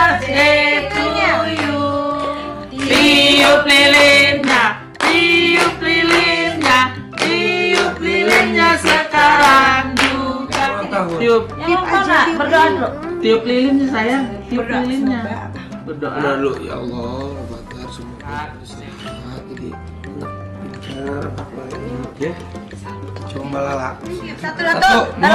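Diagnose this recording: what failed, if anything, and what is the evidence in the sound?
Nothing failed at any stage from capture to playback, and the sound gives no evidence of a technical fault anywhere along the chain.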